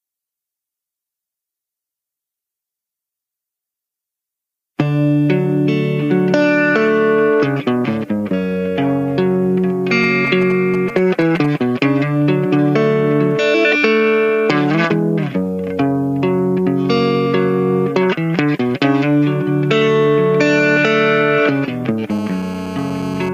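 From 10.03 to 11.46 s, GSM signalling bursts break in: a nearby 2G phone exchanging signalling traffic sends clustered radio pulses that the audio circuitry rectifies, giving a galloping dit-dit-dit of brief 217 Hz buzzes roughly 15 dB below the main sound. On a spectrogram they form short vertical blocks of evenly spaced harmonic lines.

From 22.10 to 23.29 s, GSM phone buzz appears as a phone in an active call transmits continuously at 217 bursts per second. Rectified, this becomes a hard, raspy, harmonic-rich buzz about 14 dB below the signal, unrelated to the audio. A spectrogram shows a steady comb of lines at 217 Hz multiples, and the waveform carries a regular pulse train.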